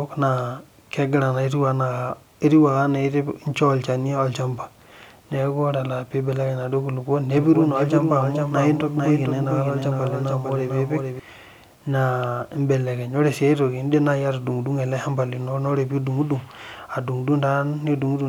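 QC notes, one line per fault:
7.38–11.20 s, doubled audio track: a second full-band copy of the speech runs about half a second behind the original, a few dB quieter, so every syllable is heard again as a clean echo with no decay or room colour. It starts and stops abruptly at those edges. This is likely a second capture through a slower path or an edit holding two copies out of step. On a spectrogram, each speech pattern repeats as a slightly fainter twin shifted right; the waveform shows stacked, offset envelopes.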